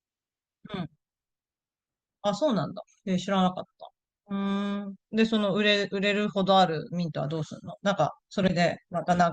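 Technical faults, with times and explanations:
8.42–8.53 s, corrupt frame decoded: a brief chirpy burst of noise, about 0.11 s long and peaking fairly loud near -10 dBFS, cuts into the speech. Damaged bits across a few compressed frames were decoded anyway, so misread codes and gains scattered energy to the wrong frequencies.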